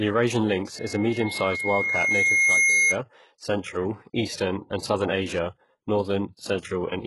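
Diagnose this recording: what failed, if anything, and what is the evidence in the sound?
HE-AAC compression, throughout the speech, is the likely cause of the heavy codec damage. The treble above the coded band is rebuilt by copying lower bands upward under a coarse envelope, so harmonics misalign, s sounds turn gritty, and nothing survives above 11.5 kHz, consistent with about 12 kbps.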